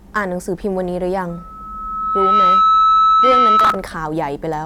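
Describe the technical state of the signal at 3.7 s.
Loudspeaker feedback squeal runs from 1.29 s to 3.86 s. The microphone is re-amplifying its own loudspeaker, and at 1.3 kHz the loop gain exceeds one. The tone has swelled over about a second and, at 3.7 s, sits about 10 dB above the speech.

Processor overload crackle rides on top from 3.60 s to 3.75 s. The processor is missing its deadlines, and the unfinished audio is skipped outright, leaving a rapid string of tiny hard-edged gaps. Their spacing fits buffers of around 10 ms, with a dozen or more missed in a row, heard as gritty tearing.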